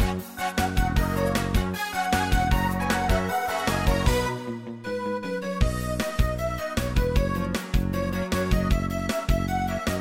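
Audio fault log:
No faults heard anywhere in the clip.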